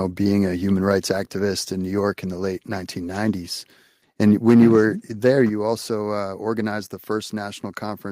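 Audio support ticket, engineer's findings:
Harsh crackle on the loud peaks, 5.25 to 5.41 s, about 2 dB over. Likely microphone overload, with the converter flattening the tops of around one percent of the samples.

Sudden level drop at 5.49 s, about 6 dB, voice and background together. Likely microphone volume stepped down by the call software after that distorted burst.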